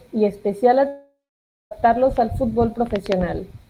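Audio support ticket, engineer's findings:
Long network dropout in speech, 0.87 to 1.73 s. Last sound stretched into a fading buzz, then about 0.56 s of near-silence. Audio resumes further on with about 0.84 s of content missing. Likely upstream packet loss, gap masked by receiver concealment.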